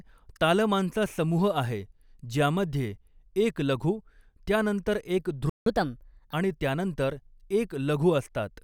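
Speech runs normally until just after "एक लघु त्यानंतर एक", where a playback stall cuts the output to silence from 5.50 to 5.66 s, a gap of about 168 ms. The sound then resumes after the gap. That sets it apart from a dropout or packet loss, where a piece of the signal would be missing rather than delayed. The likely cause is the player running short of buffered data or its audio thread being briefly blocked. A catch-up at higher speed follows at once, from 5.66 to 6.34 s, ending before "आणि त्यानंतर". The player resamples its backlog at 1.25 times normal speed, so pitch rises by about four semitones along with tempo, and both drop back once the delay is recovered. A time-stretch catch-up would keep the pitch steady, and a wrong sample rate would shift the whole clip rather than this short stretch.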